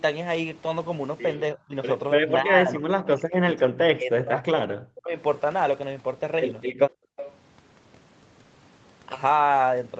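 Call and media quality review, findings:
Speech suppressed in double talk, 1.55–1.75 s and 2.17–2.26 s. Brief dips in the talker's level, roughly 20 dB and 15 dB. Likely echo canceller attenuating the near-end voice while far-end audio was also active, unable to separate the two.

Speech suppressed in double talk, 2.42–5.18 s. Sustained, deep suppression of the voice, around 40 dB at worst, for about 3 s total. Likely same mechanism: canceller treating overlapping near-end speech as echo and ducking it.

Background gated by the echo canceller, 6.93–7.17 s. Room sound drops out by about 39 dB for roughly 0.2 s, then returns. Canceller clamped the microphone hard during loudspeaker playback and released once it let go.

Echo leak, 7.17–7.35 s. Delayed copy of the voice, 299 ms behind, roughly 15 dB below the speech. Likely residual loudspeaker pickup on the loudspeaker side that its canceller failed to remove, returned across the call.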